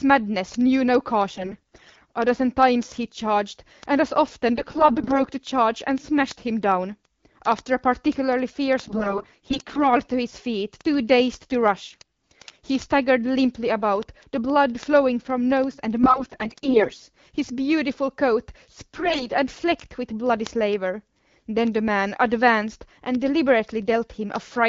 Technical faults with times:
1.31-2.12 AMR bit errors
4.56-5.19 AMR bit errors
8.81-9.85 AMR bit errors
11.87-12.66 AMR bit errors
16.02-17.02 AMR bit errors
18.93-19.27 AMR bit errors

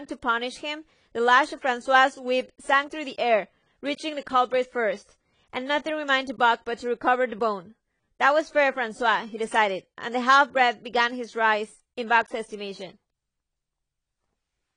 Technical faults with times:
0.00-14.76 AAC compression

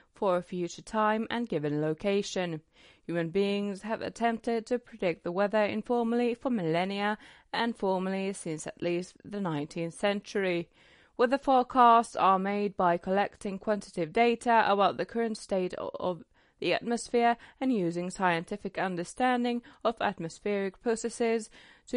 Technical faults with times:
0.00-21.97 MP3 compression

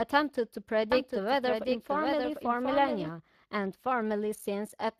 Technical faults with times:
0.00-4.99 Speex codec
0.92-3.10 doubled audio track

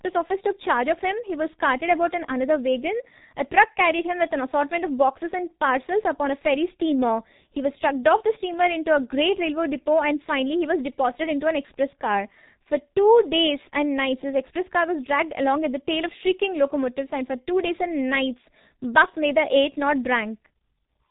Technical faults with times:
0.00-21.11 G.723.1 codec

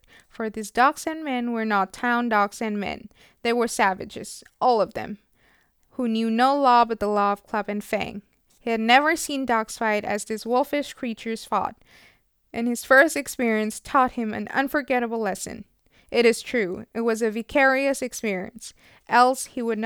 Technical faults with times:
none

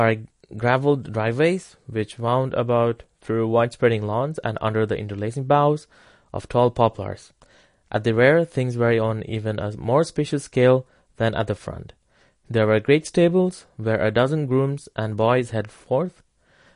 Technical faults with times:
0.00-16.76 MP3 compression

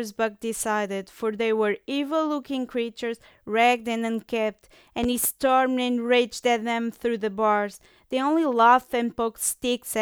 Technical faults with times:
5.04-5.27 loud pop

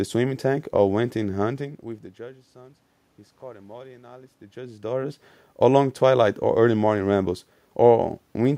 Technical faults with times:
none

